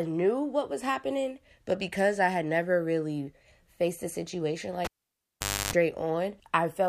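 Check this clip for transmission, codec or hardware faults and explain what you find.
There is one hardware fault, a cable pulled and plugged in. From 4.85 to 5.73 s, just after "really faced a situation", a pop cuts the audio to near silence for about 0.84 s. A 50 Hz mains buzz then sounds for about 0.30 s while only the plug tip makes contact, and a second pop brings the audio back. In the waveform this shows as two sharp spikes around a flat gap, and the spectrogram shows 50 Hz harmonic lines during the buzz.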